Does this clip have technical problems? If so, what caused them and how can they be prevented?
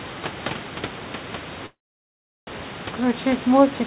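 Yes, a call audio freeze from 1.66 to 2.49 s. The last sound trails off into roughly 0.73 s of silence, likely because delayed packets let the jitter buffer run dry. The sound then resumes exactly where it stopped. Unlike a packet-loss dropout, nothing is skipped; everything after it simply arrives about 0.81 s late. Prevention: give the call a steadier network path, or let the jitter buffer hold more audio so short delivery stalls don't empty it.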